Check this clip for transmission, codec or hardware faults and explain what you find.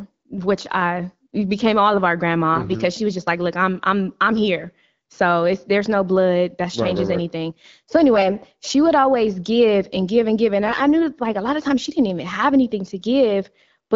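There are three short bursts of AMR bit errors in this speech, at 2.62–2.79 s, 8.16–8.31 s and 10.66–10.80 s. Flipped low-priority frame bits throw off pulse placement and the fine pitch, gain and spectrum values, so pitch and level hold but the voice goes hoarse and gargly. The last burst has a much higher error rate, about 15% against roughly 5% and 4% for the first two. The underlying HD Voice coding sounds clean, consistent with AMR-WB at around 12.65 kbit/s.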